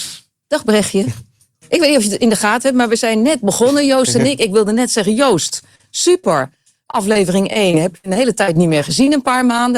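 Repeated packet loss (robotic sound) runs from 5.47 to 6.25 s and again from 7.53 to 8.57 s, with five and six dropouts patched by extending the preceding sound, the longest about 65 ms. The result is choppy audio with pieces missing. Short concealed packet loss occurs at 6.91–6.95, 7.13–7.17, 9.05–9.09 and 9.57–9.60 s, where about 20 ms holes were filled from the previous sound, each heard as a brief smear or wobble.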